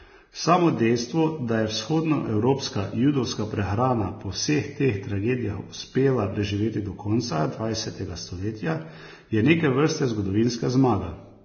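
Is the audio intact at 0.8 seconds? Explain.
No. At 0.8 seconds the speech carries heavy Vorbis compression damage, present throughout the clip. The likely cause is a low-quality Vorbis encode, and the damage suggests a very low bitrate, near 18 kbps. To save bits, the encoder discards everything above 6.5 kHz and quantises the remaining treble so coarsely that fine detail becomes noise of similar energy. The result sounds dull, hissy and grainy, with blurred consonant attacks.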